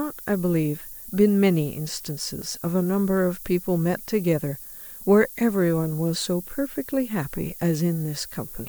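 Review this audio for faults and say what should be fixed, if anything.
A thin, steady hiss sits under the speech for the whole clip, climbing sharply toward the top of the band. That's low bit depth with noise shaping: only about 7 bits, with the rounding error pushed up into the highs, leaving the noise only around 15 dB below the speech. Keep the signal at 16 bits or more through any requantisation, and only dither and shape once, at the final export.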